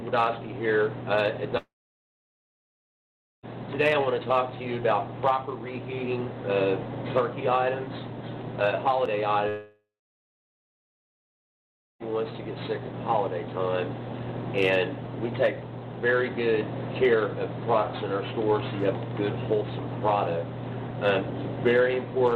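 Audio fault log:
1.57–3.46 s and 9.49–12.14 s, long network dropout: the sound breaks into a short fading buzz or hiss, then about 1.75 s and 2.14 s of silence. It's likely the stream stalled, since roughly 1.9 s and 2.5 s never come back.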